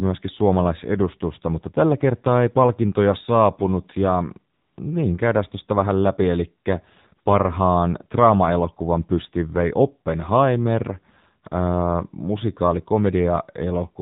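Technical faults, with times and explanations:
Throughout, AMR narrowband mobile codec: the speech is squeezed into an 8 kHz sampled band, so nothing above 4 kHz survives, and the damage is plainly audible as a buzzy, synthetic quality. The coder rebuilds each 20 ms frame from a vocal-tract filter excited by a handful of pulses per 5 ms slice. With so few pulses the voice loses natural texture, and the degree of buzz fits a low mode such as 7.4 kbps.
4.54–4.78 s, AMR comfort noise: right after "ei palkintoja saapunut ja" the real background drops out for about 240 ms and is replaced by a smooth, steady hiss until "niin käydään tuosta vähän" resumes. The sender judged this gap silent and stopped transmitting speech frames. The receiver filled the hole with noise generated from only a rough level and spectral description, so the texture changes abruptly as it switches in and back out.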